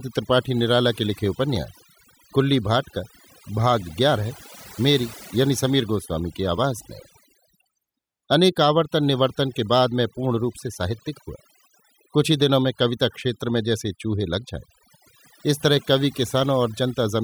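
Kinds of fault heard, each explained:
overdone noise removal: Present across the whole speech clip, a noise reduction process pushed far too hard has stripped the recording. Whenever a frequency band sat close to what the processor judged to be noise, it was pulled down sharply or muted outright, taking softer parts of the voice along with the noise. The gaps between phrases drop to near silence dotted with glittering, chirpy specks.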